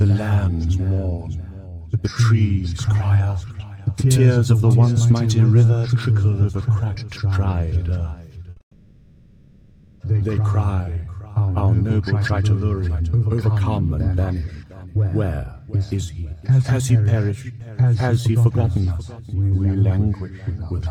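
The audio runs into a cluster of delivery problems starting at 8.50 s. Two short stalls from a late packet come first: from 8.50 to 8.57 s the last sound is held for about 60 ms, then from 8.57 to 8.61 s for another 30 ms. In both cases the jitter buffer ran dry, the receiver sustained the tail until the data turned up, and nothing was lost. Straight after, from 8.61 to 10.01 s, there is a call audio freeze. The held sound decays into a fading buzz or hiss and then around 100 ms of silence, pushing everything back by 1.39 s without dropping any content, most likely because packets were held up somewhere along the route. To rebuild its reserve, the receiver then applies a jitter buffer slow-down from 10.85 to 11.65 s. It repeats pitch periods so the passage plays at 84% speed with pitch unchanged, which adds 133 ms and produces a slightly stretched feel. A jitter buffer speed-up follows from 13.80 s to 20.51 s, running at 112% speed and trimming roughly 0.7 s in total by cutting out short periodic segments, so this stretch sounds hurried. 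Within it, at 16.59 s and 17.39 s, there are two short concealed packet losses, each losing 10 ms. Each hole is filled by extrapolating the previous sound and heard as a brief smear or wobble.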